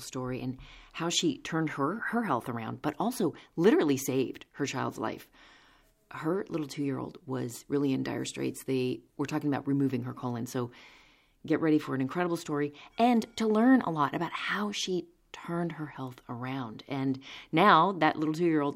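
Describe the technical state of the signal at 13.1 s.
At 13.1 s the speech signal is intact, with no audible fault at that moment.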